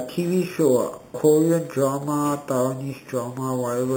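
Imaging from sample-and-hold upsampling runs throughout this speech clip. Each sample was repeated to reach 44.1 kHz with no smoothing filter, which fits an 8 kHz source. Mirrored spectra fill 4 to 8 kHz at about -19 dB, a metallic fizz tracking the speech.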